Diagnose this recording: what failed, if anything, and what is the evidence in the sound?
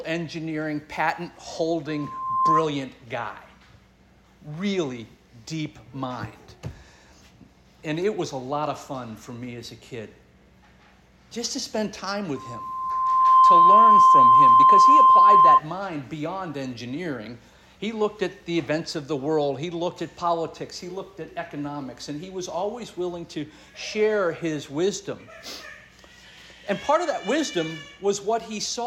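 Loudspeaker feedback squeal in the analogue microphone-to-loudspeaker loop, at 1.88–2.67 s and 12.35–15.60 s. Loop gain exceeds one at 1 kHz, so that tone swells over roughly half a second, then a second, to about 10 and 15 dB above the sound. Spectrograms show a bright 1 kHz line; waveforms, a ramping envelope.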